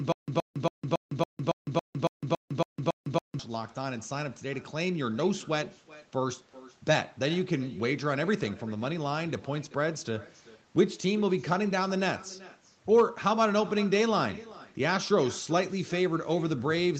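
Stutter with silent gaps runs from 0.00 to 3.39 s in this speech clip and is already under way when the audio starts. A 122 ms fragment repeats eleven times at an even 278 ms period, each followed by 156 ms of digital silence, and the material that should have filled that time is lost, most likely because the stream stalled and replayed its last fragment on each retry. Echo with no canceller is present throughout. Every phrase returns roughly 0.4 s later as a quieter, thinner copy about 20 dB below the direct speech. This points to the far end playing the call on a loudspeaker whose microphone picked it up with nothing removing it, and that pickup then travelled back over the round trip. Nothing is heard above 8 kHz, which fits the call's microphone processing and Opus path.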